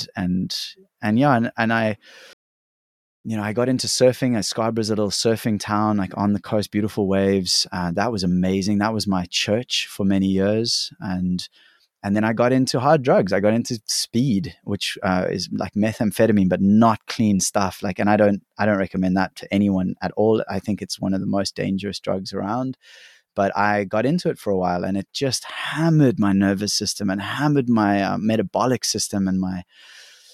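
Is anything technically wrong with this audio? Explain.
Yes. At 2.33 s the speech cuts out into silence and doesn't return until 3.24 s, a gap of about 0.91 s. This is a playback stall: the output goes dead in mid-flow rather than fading, then resumes. The likely cause is the player's buffer running dry or its audio thread being blocked, so no samples reached the output until data arrived again. The result is an abrupt hole in the speech, not a dropout of a few milliseconds.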